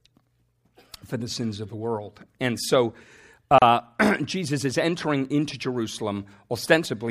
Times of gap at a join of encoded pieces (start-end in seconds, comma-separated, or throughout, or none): 3.58-3.62